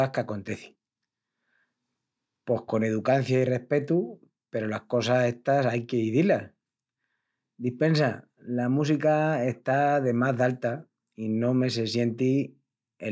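Nothing stood out on listening to this speech, which has been through a call's microphone processing that trims the lowest bass and carries nothing above 8 kHz.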